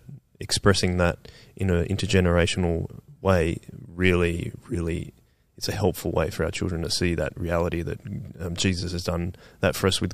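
Nothing stood out on listening to this recording of speech.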